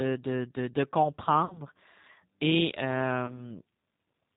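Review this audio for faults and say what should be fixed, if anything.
The whole recording runs through the G.729 codec, and you can plainly hear it. Everything above 4 kHz is gone, so the speech sounds boxy, and there's a rough, slightly synthetic edge because the decoder rebuilds each 10 ms frame from a vocal-tract filter, a pitch predictor and a few pulses, which fits an 8 kbit/s G.729A stream. To avoid this, use a wideband codec such as Opus or G.722 on the call leg instead of G.729.

There's also VoIP packet loss concealed by the speech codec in two spots. From 1.45 to 1.60 s, roughly 50 ms of audio went missing, which points to about five lost frames. The decoder keeps extending the last pitch and filter at falling gain, so the sound smears into a buzzy tone or a coloured noise that fades. From 3.26 to 3.57 s there's a shorter gap of around 20 ms, but the speech stays weak and distorted for a while afterwards because each frame depends on the one before it. 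To prevent this, fix the network loss and use a jitter buffer with FEC or redundancy.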